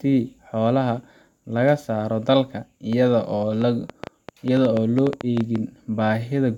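From 2.93 to 5.57 s, a train of clicks ticks unevenly over the speech, about six per second and around 10 dB above it, likely interference or a faulty connection.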